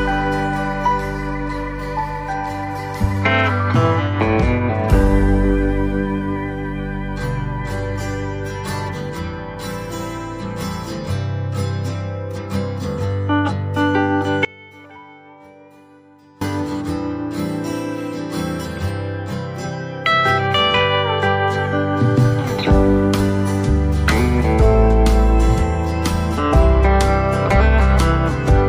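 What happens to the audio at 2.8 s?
Nothing goes wrong at 2.8 s; the audio plays through that moment intact, with no dropout, click, distortion or other fault.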